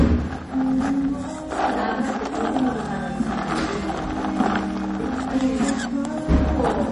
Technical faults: MP3 compression

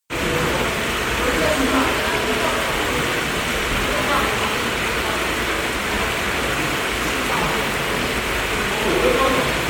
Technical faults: generation loss

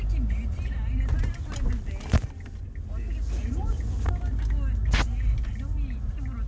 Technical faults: none

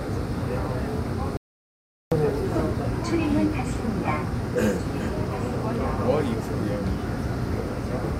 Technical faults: audio dropout to silence

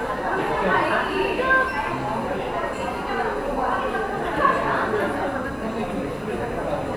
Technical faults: none

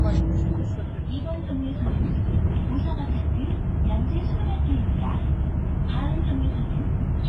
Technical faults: WMA compression

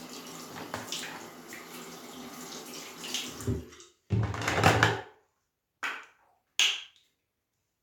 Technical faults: none

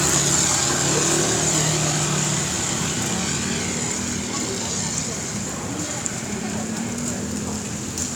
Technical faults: dropped samples

